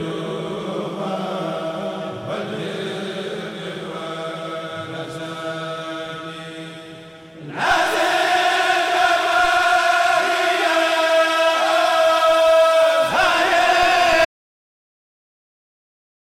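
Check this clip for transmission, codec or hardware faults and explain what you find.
One fault turns up, at the end of the clip. Audio dropout to silence from 14.25 s to the end: the input was likely lost, through a disconnected device, failed link or mute, while recording carried on writing silence. The sound cuts off abruptly, leaving about 2.1 s of silence with no room tone.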